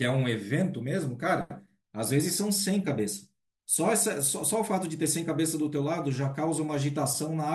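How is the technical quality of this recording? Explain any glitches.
The recording has one brief glitch. At 4.00 s the speech is hit by a few short watery blips, DAB burbling, where a small fraction of transmission bit errors corrupted the MP2 data, putting short blips of noise into single sub-bands across what sounds like a couple of frames.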